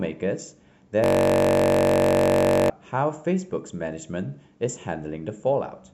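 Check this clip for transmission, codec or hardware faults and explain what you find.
There's a system hang loop from 1.04 to 2.70 s. The driver stalled while the hardware kept replaying one 21.3 ms chunk of the speech, which fits a 1024-sample buffer. Repeated dozens of times, it turns into a steady buzz at about 47 Hz.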